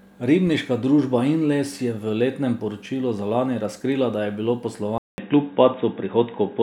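Speech that, at 4.98 s, drops out for 200 ms, then returns dull and boxy with nothing above 3.8 kHz, a level change of about 5 dB and faint new background noise; likely an input switched to a poorer device.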